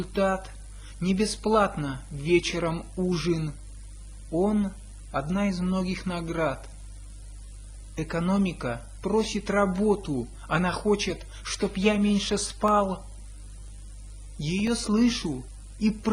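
Corrupt frame decoded, at 3.19 to 3.22 s and again at 9.21 to 9.26 s: a compressed frame reached the decoder with damaged bits, and the decoder played it instead of concealing it. Misread gains and codes placed energy at the wrong frequencies. The first event covers roughly one frame and is short. The second spans a few consecutive frames and is longer, lasting about 45 ms.

Periodic USB or driver dropouts, from 12.68 s to 15.67 s: about four brief losses arrive exactly 1.0 s apart. Each time, something stalled the USB bus or the audio driver, and roughly a millisecond of audio was replaced with silence. The evenly spaced gaps are heard as regular ticks cutting into the sound, with a steady once-per-second rhythm that points to a background task on a fixed timer.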